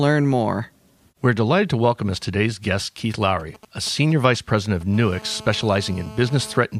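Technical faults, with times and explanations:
3.40–4.83 s: GSM signalling bursts. A 2G phone close to the recording chain is exchanging short control transmissions with its network, not carrying a call, so its radio pulses arrive in brief groups. The audio circuitry rectifies each group into sound, giving a galloping dit-dit-dit of short buzzes at a 217 Hz repetition rate, sitting roughly 20 dB under the speech. The broken, clustered rhythm separates it from a phone's continuous call buzz.
4.94–6.58 s: GSM phone buzz. The same kind of nearby 2G handset is now transmitting continuously, as during a call, sending radio bursts 217 times a second without a break. Rectification in the audio path turns that pulse train into a hard, raspy tone at 217 Hz with a dense stack of harmonics, about 20 dB below the speech and unrelated to it. Unlike the earlier signalling bursts, it holds steady rather than stuttering in clusters.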